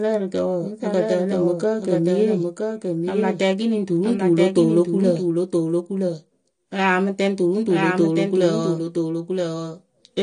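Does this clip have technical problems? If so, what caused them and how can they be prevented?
Yes. Throughout the speech, every sound comes back again about a second later: a full-band second copy, a few decibels quieter than the original, with no decay or room colour. It is a clean duplicate, not an echo from a space. It is likely a doubled audio track, where the same signal reaches the mix twice, once directly and once through a slower route or a misaligned edit. To prevent it, monitor or record through a single path and mute any redundant return before mixing.

The audio also sounds dull and smeared all the way through. Nothing is present above 9.8 kHz, and sustained sounds and sibilants take on a warbling, fizzy texture. The likely cause is AAC compression at a low bitrate, consistent with AAC-LC at around 32 kbps. At that rate the encoder lowers its cut-off and coarsely quantises or substitutes noise for the bands it keeps. 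To prevent it, encode at a higher bitrate or keep an uncompressed master.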